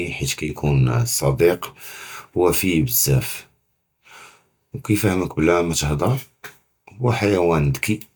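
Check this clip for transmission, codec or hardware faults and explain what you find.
Nothing in the signal points to a transmission, codec or hardware problem; the speech arrives intact and continuous, with no disturbance anywhere along its path.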